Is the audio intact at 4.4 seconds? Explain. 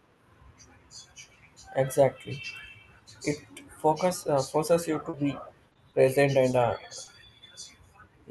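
Yes, the speech at 4.4 seconds is intact, carried cleanly through the WebRTC call path with no dropout, glitch or other fault at that moment.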